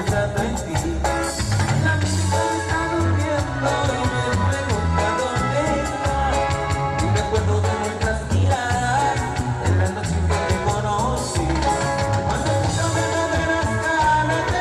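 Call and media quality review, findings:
Adaptive stream starting at a low bitrate, 0.0–2.0 s: muffled, artefacted opening; spectrogram treble empty, then abruptly fills with no gap. Fits player stepping from Opus 24 kbit/s to 64 kbit/s.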